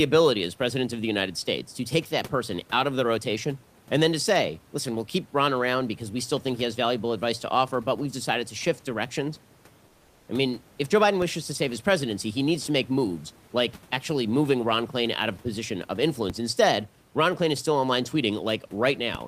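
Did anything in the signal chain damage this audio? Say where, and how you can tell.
Yes. From 9.87 to 10.27 s, in the pause after "decided to shift directions" and before "I mean if", the room background, which normally sits about 30 dB under the speech, is replaced by a flat, featureless hiss about 4 dB quieter. This is comfort noise in place of the background, and the likely cause is codec-stage discontinuous transmission, as in Opus DTX. The sender goes quiet when it detects silence, and the receiver fills the 400 ms gap with synthetic noise.

There are three DC steps, at 11.22 s (just before "to save his presidency"), 16.30 s (after "of a position of") and 19.15 s. Each is a dull low thump while the speech carries on unchanged. The zero line of the waveform jumps abruptly at the converter or analogue input, then drifts back as a high-pass near 5 Hz bleeds the offset away, so each step leaves a short, sagging tail rather than a permanent shift.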